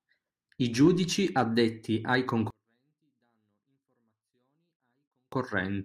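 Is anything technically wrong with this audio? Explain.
Yes. From 2.50 to 5.32 s, just after "I giudici addetti ai", there is a 24-bit alignment error. Samples sitting in the low bytes of 32-bit words are read as full 32-bit values, so the level drops by about 48 dB at once, yet stays clean, unlike a dropout or distorted gain fault.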